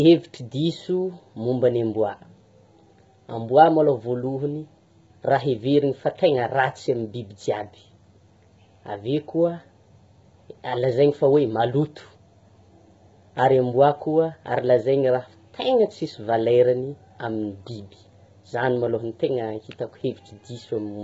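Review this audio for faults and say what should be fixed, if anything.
The speech sounds rough and grainy throughout, with nothing above 7.8 kHz, likely heavy low-delay AAC compression (AAC-ELD) at a low bitrate around 16 kbps. Raising the call bitrate or using a wideband codec setting should prevent it.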